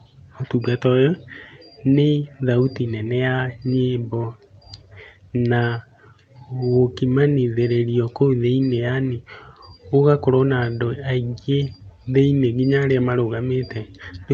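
No technical faults can be heard in this speech recording. It has gone through a WebRTC call path working as intended, with the usual coding noise of what sounds like the Opus codec and no high frequencies above 8 kHz.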